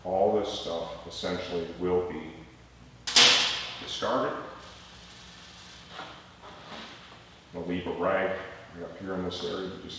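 No faults are audible; the audio came through a call path whose band stops at 8 kHz, which fits a wideband codec such as G.722 at 64 kbps.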